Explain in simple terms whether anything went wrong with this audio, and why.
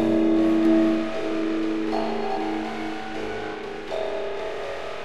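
Doubled audio track from 0.65 to 2.37 s: a noticeably quieter copy of the sound trails about 0.4 seconds behind, likely from a slower recording path.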